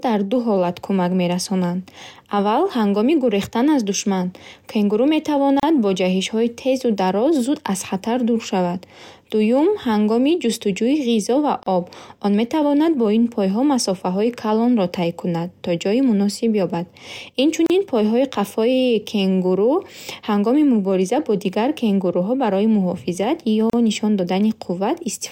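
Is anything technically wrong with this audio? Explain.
Yes. In this speech clip, short dropouts of silence, about 34 ms each, cut into the flow at 5.60–5.63 s (just before "бо ҷаҳишҳои тезу дароз"), 11.63–11.66 s (right after "ҳангоми ҷустуҷӯи ғизо ва"), 17.66–17.70 s, and 23.70–23.73 s (right after "кенгуруҳо барои муҳофизат ё"). They recur every 6 s, each with smeared edges, and the speech resumes where it stopped. This is a gap at a join of encoded pieces: 6-second segments were encoded separately and joined untrimmed, leaving encoder delay and last-frame padding as silence.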